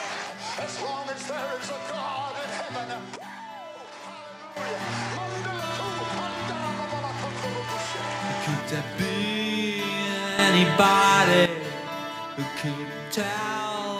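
At 3.16 s the level drops abruptly by about 10 dB and stays down until 4.57 s, then from 10.39 s to 11.46 s it jumps up by about 10 dB. These are sudden gain jumps, likely from a digital gain setting applied instantly without a ramp. Unlike a fade or compressor action, there is no gradual transition, and the background noise shifts in level together with the sound itself.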